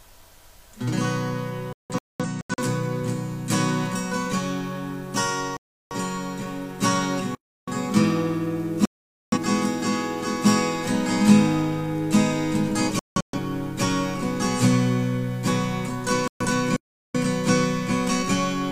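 The audio keeps falling out in two different ways. Five digital broadcast dropouts mute it at 1.73 to 2.61 s (several short holes, the longest about 0.21 s), 5.57 to 5.95 s, 8.85 to 9.38 s, 12.99 to 13.38 s (broken up again) and 16.28 to 16.45 s. Each time the receiver has lost whole frames and gone quiet until clean ones arrive, so that stretch of programme is simply gone. There are also two playback stalls, at 7.35 to 7.68 s and 16.76 to 17.15 s, each about a third of a second of silence that sounds like the player likely running dry or getting blocked before picking back up.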